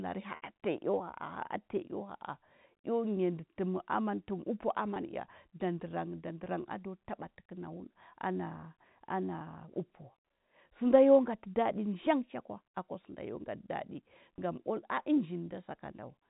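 Speech over a narrowband telephone line shows packet loss with pitch repetition: about 60 ms at 0.36 to 0.42 s, and about 20 ms each at 4.94 to 4.96, 6.44 to 6.46 and 14.36 to 14.38 s. Each 20 ms gap is a held, buzzy pitch cycle rather than a click or silent dropout, while the 60 ms gap fades into silence before the speech returns with a short cross-fade.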